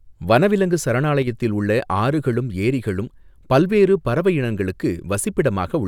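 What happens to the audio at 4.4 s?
Nothing goes wrong at 4.4 s; the speech carries on intact through that moment, with no dropout, click, distortion or other audible fault.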